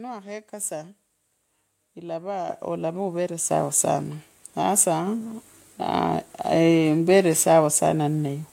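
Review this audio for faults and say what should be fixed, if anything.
The microphone volume is stepped up three times in this speech, at 2.49 s (about 8 dB), 3.51 s (about 6 dB) and 5.07 s (about 3 dB). Each time, the call software judged the input too quiet and raised the device's input volume in one step. Voice and background noise jump together, instantly. A talker moving closer would raise the voice but not the room sound, and a compressor or automatic gain control would ride the level smoothly rather than in discrete steps. To prevent it, disable the application's automatic microphone-level adjustment and set the input gain correctly before the call.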